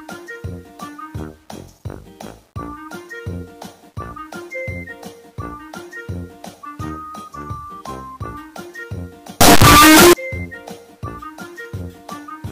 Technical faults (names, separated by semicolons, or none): signed and unsigned mixed up